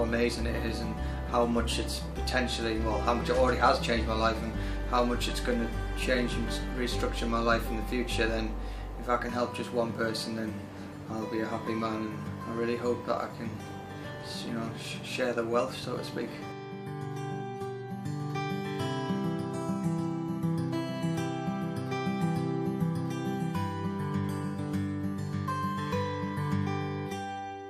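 Nothing here trips any alarms, with no dropouts, glitches or other technical faults turning up anywhere in the recording.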